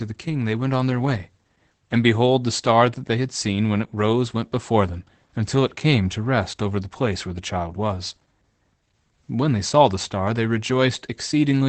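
Opus voice compression runs through the whole speech clip and is plainly audible. Nothing sounds above 8.7 kHz, and the voice turns hoarse and slightly robotic, which fits SILK wideband coding near 12 kbps. Unlike a plain low-pass filter, the roughness sits within the voice itself.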